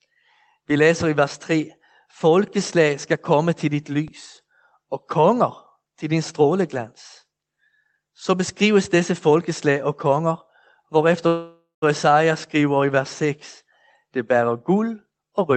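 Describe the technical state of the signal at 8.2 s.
At 8.2 s the speech is intact, with nothing audible beyond the ordinary band-limited character of the WebRTC call path it passed through.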